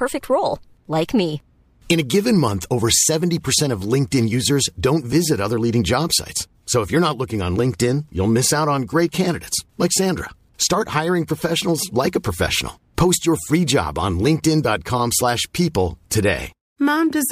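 Speech, carrying sample clock jitter throughout: the converter's clock wanders by around a microsecond, so each sample lands slightly off time. The timing error tracks the waveform's slope, adding a hiss-like roughness roughly 35 dB below the voice that swells on loud, bright sounds and disappears in pauses.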